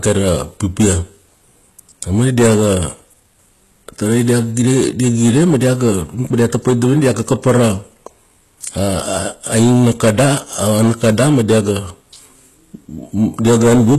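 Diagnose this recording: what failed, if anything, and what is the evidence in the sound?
A stage ahead of the recording was driven about 13 dB past what it could pass, whether an analogue input, the converter or a sample-format conversion. The peaks were cut flat on roughly 7 percent of the samples across the whole speech clip. Those squared-off tops add harmonics well above the speech itself, so the louder syllables throughout carry a constant fuzzy distortion rather than occasional crackle. This is hard clipping, present from start to finish.

The audio was then most likely passed through HE-AAC compression. The codec damage is plainly audible throughout, and nothing is present above 12.3 kHz. That ceiling and the level of artefacts fit a low bitrate around 16 kbps. In HE-AAC the encoder keeps only the lower band and rebuilds the treble by copying lower content upward under a coarse envelope. 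As a result, the upper harmonics do not line up with the ones below, and s sounds come out gritty or lispy.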